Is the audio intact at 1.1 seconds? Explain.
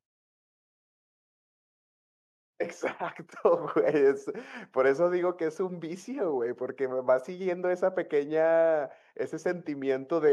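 Yes, the speech is intact at 1.1 seconds, with no fault there.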